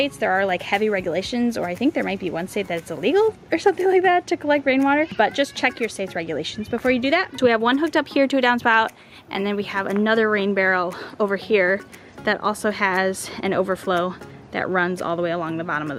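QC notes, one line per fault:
Nothing to log here, since no faults turn up anywhere in the clip.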